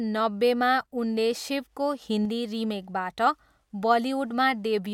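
A speech clip with a sudden gain jump from 2.02 to 2.25 s. Speech and background noise rise together by about 4 dB. This is likely a gain change applied without a ramp.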